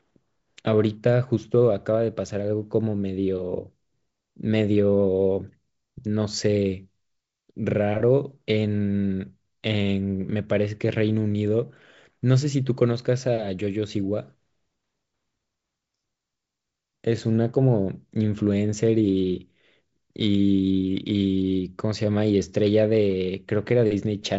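Nothing's wrong with this speech clip: it's carried over G.722 wideband telephone coding at what sounds like 56 kbit/s, with the audio stopping around 7.7 kHz just as that path would give it, and no faults turn up anywhere along the way.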